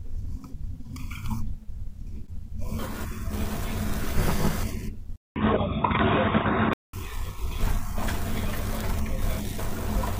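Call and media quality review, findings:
Input switched to a poorer device, 5.16–6.93 s. Speech drops out for 200 ms at the switch, then returns boxy and dull: nothing above 3.8 kHz, level shifts by a few dB, and a new faint noise floor sits well under the voice. Likely cause is a capture-device or headset-profile change. Unlike a codec bandwidth drop, it brings a silence gap plus altered level and noise character, not just lost treble.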